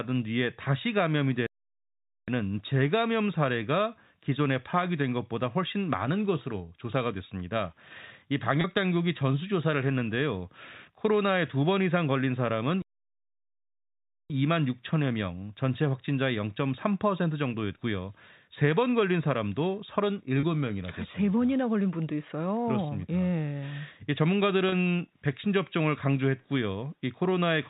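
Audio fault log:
1.46–2.28 s and 12.82–14.30 s, playback stall: the speech stops mid-flow and the output falls silent for 0.81 s, then 1.48 s, before resuming. This is likely the player running short of data or its thread being blocked until it recovered.
8.61, 20.40 and 24.69 s, packet loss with pitch repetition: each time, a 30 ms stretch turns into a held, buzzy tone, which fits a single lost packet. The receiver bridged each gap by repeating the last pitch period instead of leaving a hole.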